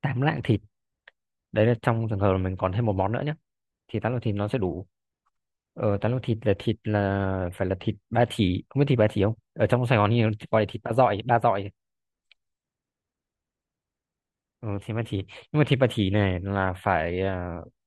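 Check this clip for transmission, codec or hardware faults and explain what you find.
Nothing wrong can be heard anywhere in this recording.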